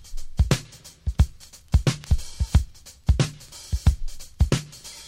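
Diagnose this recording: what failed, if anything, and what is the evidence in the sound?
Nothing stood out on listening that would point to a failure at any stage of the chain.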